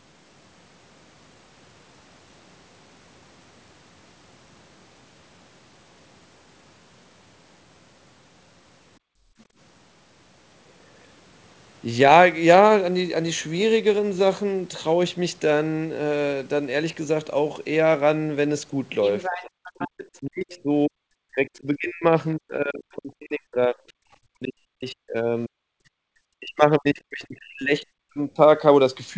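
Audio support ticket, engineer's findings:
Background gated by the echo canceller. Room tone dips then returns, 8.99–9.57 s, down about 31 dB. Echo canceller clamping the mic while the loudspeaker played. Same symptom 25.93–26.06 s, brief, about 38 dB down. Background returns each time the canceller lets go.

Other side's voice leaking through. Second talker audible under the main one 19.03–19.9 s, roughly 10 dB below the speech. Faint scrap again 20.51–20.58 s, roughly 30 dB down. Likely incomplete echo cancellation: far-end audio from the loudspeaker reaching the mic and not fully subtracted, so it is sent back.

Speech suppressed in double talk. Main talker's speech repeatedly dips and cuts out in pieces 19.29–25.65 s, most of that span affected, drops around 40 dB at worst. Again 26.34–28.39 s, about 1.5 s of it hit, similar depth. Likely the echo canceller failing to separate near-end speech from loudspeaker echo while both sides talked, so it attenuated both. 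Band tops out at 8 kHz via the G.722 call path.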